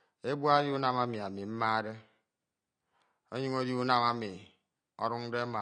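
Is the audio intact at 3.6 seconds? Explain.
No. At 3.6 seconds the speech carries the same damage heard from start to finish. The top end is dull. Sibilants turn fizzy and smeared, and sustained sounds warble. The likely cause is AAC compression. The coder splits each frame into frequency lines and quantises them coarsely. It drops the highest band and leaves gaps in the rest. This damage is plainly audible, which fits a low bitrate near 32 kbps.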